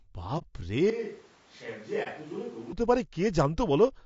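Speech with a rough, grainy texture from start to finish, noise filling the gaps between harmonics and a thin, synthetic top band. That points to low-delay AAC compression, likely AAC-ELD at a low rate near 32 kbps. From 0.90 to 2.73 s there is a switch to a distant microphone, likely the room or camera mic standing in for the close one. The voice drops about 10 dB and turns hollow and roomy, with room noise roughly 25 dB below the speech. The change is abrupt at both ends, unlike a gradual fade or EQ drift. Two short holes, at 0.38–0.44 s and 2.03–2.08 s, are AAC frame loss with muting. The decoder zeroed one lost frame each time, a 30 ms gap faded out and back in by overlapping windows. That leaves soft edges, which sets them apart from dropouts with hard cuts.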